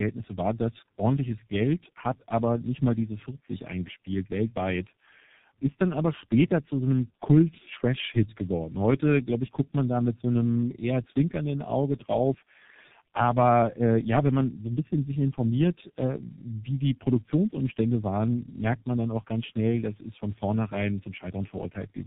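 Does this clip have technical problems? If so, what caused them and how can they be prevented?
Yes. Throughout, the speech sounds rough, muffled and warbly from tandem speech coding. Two low-rate speech coders in a row, which fits G.729A followed by G.723.1, with the second re-encoding the first's degraded output. A spectrogram shows nothing above 3.8 kHz and smeared formants. To prevent it, keep one codec end to end or use transcoder-free operation so speech is compressed only once.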